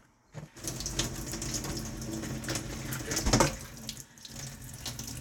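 At 0.47 s and again at 3.25 s there is a brief blip lasting under 20 ms, the mark of damaged data in a compressed stream. In each spot part of the encoded stream was corrupted, so the decoder misread the affected frame, lost its place in the bitstream and had to resynchronise on the next valid frame header. What comes out is a short glitch in the sound.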